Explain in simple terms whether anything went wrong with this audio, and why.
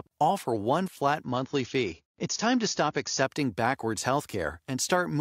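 Something did go wrong in this speech clip. From 1.24 s to 3.24 s the stream dropped to a lower-bitrate version, the adaptive stream at a lower bitrate fault, most likely because the connection slowed for a moment. During those two seconds everything above about 7.1 kHz disappears, so the sound turns dull. Unlike a dropout, nothing goes silent. The quality simply switches down and back up abruptly, with no gap either time.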